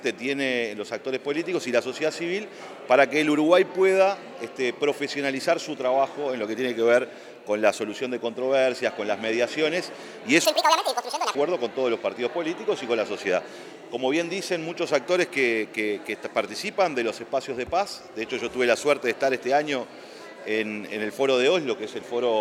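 At 10.45 s a section at the wrong speed begins and runs to 11.35 s. For that stretch the audio plays 1.82 times too fast. Pitch jumps about ten semitones with it. The sound turns high and hurried, then snaps back. A mismatched playback clock is the likely cause.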